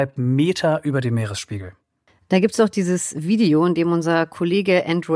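Listening to the speech recording, nothing technical stood out as wrong.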